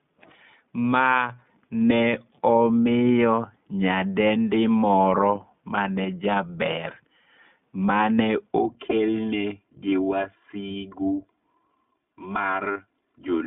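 Throughout, the speech sounds narrow, clear but rough and slightly synthetic, with nothing above 3.6 kHz or below 150 Hz. This is the iLBC codec, in its 20 ms frame mode at 15.2 kbps.

From 8.58 s to the end, the sound turns hollow and phasey. This is channel delay comb filtering: one channel lags by roughly 3 ms, and summing to mono cuts evenly spaced notches starting low, near 150 Hz.

At 10.72 to 10.75 s and again at 12.72 to 12.77 s, brief held, buzzy vowel-like fills replace the speech before it recovers almost immediately. These are lost iLBC frames: one frame of 20 ms, then two frames totalling 40 ms, concealed by repeating the last pitch cycle with noise.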